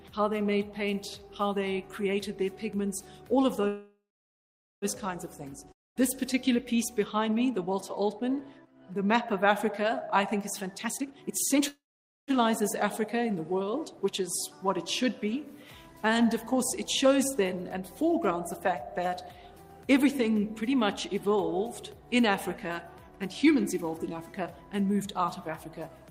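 At 3.67 s a call audio freeze begins. The last sound stretches into a fading buzz, then about 0.82 s of silence. Audio resumes at 4.85 s exactly where it stopped. Packets were likely held up, emptying the jitter buffer.

At 5.72 s a long network dropout cuts in. A brief fading tail gives way to about 0.22 s of silence. At 5.99 s the audio returns, but roughly 0.24 s is gone. Those packets likely never arrived.

From 10.76 to 11.62 s comes a jitter buffer speed-up at 152%. The pitch holds while the sound rushes. Tiny slices of a few pitch periods are repeatedly cut to drain excess buffered audio. About half a second disappears.

A second freeze runs from 11.68 to 12.31 s. It holds about 0.49 s of silence, then continues intact.

Gentler speed-ups follow. From 16.10 to 17.58 s the rate is 107%, removing about 0.1 s. From 21.08 to 21.36 s it is 111%, removing about 40 ms. From 23.11 to 23.98 s it is 109%, removing about 0.1 s.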